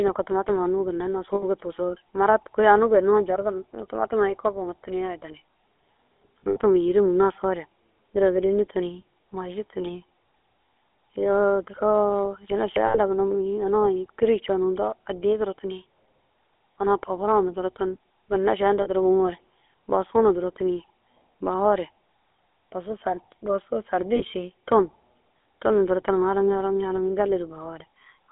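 The GSM full-rate codec is present throughout. It rebuilds the speech from a vocal-tract model excited by sparse, regularly spaced pulses, which fits 13 kbps full-rate coding. That leaves a plainly audible buzzy, gravelly roughness within a band of 300 Hz to 3.5 kHz.

Lost GSM frames occur at 1.34–1.44, 6.4–6.57 (just before "yîrim nasoore duro gîleni"), 12.86–12.97, 18.82–18.88 and 24.16–24.23 s. Each gap is filled by repeating the last good frame, giving a brief rough, metallic ring.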